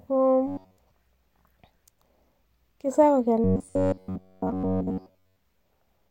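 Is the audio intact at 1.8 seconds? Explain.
Yes, the speech is intact at 1.8 seconds, with no dropout, click, distortion or other technical fault at that moment.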